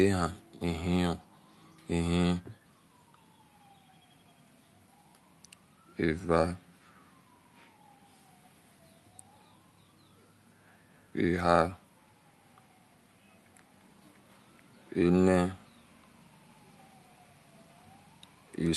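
No technical faults can be heard anywhere in the speech. It has come through a working call path, with coding that sounds consistent with Opus at around 48 kbps and a top end that stops near 12 kHz.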